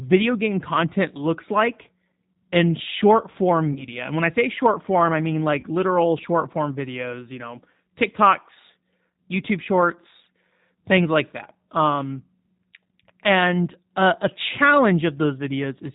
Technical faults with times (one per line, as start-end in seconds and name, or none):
0.00-15.94 G.729 codec
3.73-3.85 VoIP packet loss concealed by the speech codec
5.60-5.65 VoIP packet loss concealed by the speech codec